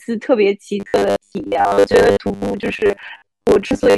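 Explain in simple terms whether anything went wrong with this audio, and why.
From 0.8 s to the end, the speech becomes a stiff metallic buzz at 100 Hz: robotic sound from repeated short buffers. Audio likely arrived too slowly, so 10 ms scraps were replayed, skipping most of the speech. Unlike a steady hum, it follows the speech's rhythm.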